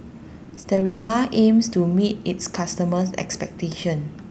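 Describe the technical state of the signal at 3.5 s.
At 3.5 s the speech is intact, with no fault present, only the ordinary coding character of the call path it passed through.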